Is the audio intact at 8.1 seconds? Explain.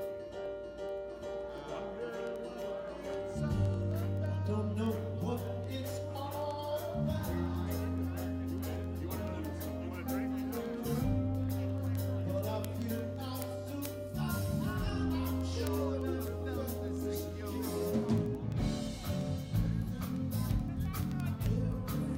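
No. Word clock ticks run from 0.11 s to 22.15 s, so 8.1 s falls inside them. The receiving device isn't locked to the sender's clock, and the two clocks differ by roughly 300 ppm. Each slip drops or repeats one sample, heard as sharp, uneven ticks about every tenth of a second.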